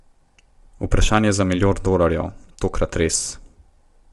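From start to finish the speech has a rough, grainy texture, with a hiss-like fill between the harmonics and nothing at all above 11.6 kHz. This is low-delay AAC compression, likely AAC-ELD as used in video calls, at a bitrate that sounds around 32 kbps. Its very short frames cannot resolve the voice's pitch harmonics cleanly, and the limited bits cannot code them precisely, so noise seeps between them and the top band is cut away.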